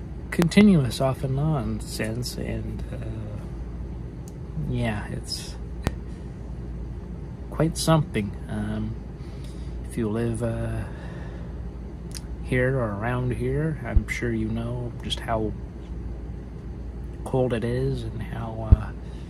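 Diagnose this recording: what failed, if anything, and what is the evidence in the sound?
Four loud pop events sit on top of the audio, which carries on underneath each one. The first, at 0.42 to 0.64 s, is a double pop, two hits close together. Single pops follow at 5.87, 13.96 and 18.72 s. They peak at roughly 20 to 25 dB above the programme. The likely cause is in the analogue wiring, a plug, switch or static discharge putting a voltage step into the line, which the downstream circuitry shapes into a thump.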